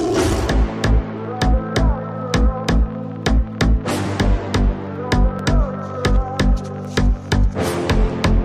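Brief clicks or tiny buzzes land at 0.33 s, 4.06 s and 5.39 s; the one at 4.06 s lasts slightly longer. Each is a repeated buffer: fresh audio missed its deadline, so the device replayed its last block of about 5.8 ms, which fits a 256-sample buffer. That block plays twice at 0.33 s and 5.39 s and three times at 4.06 s, with hard joins, and essentially nothing is dropped.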